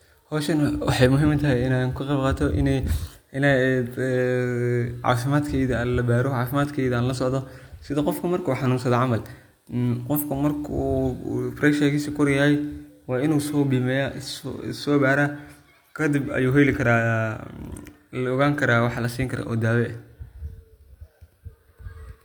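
A speech recording, sounding throughout like low-bitrate audio saved at a high bitrate: the band reaches about 20.2 kHz, yet the earlier encoding's artefacts remain. The likely cause is a lossy file, something like 48 kbit/s HE-AAC, re-encoded as MP3 at about 256 kbit/s, which cannot restore what was discarded.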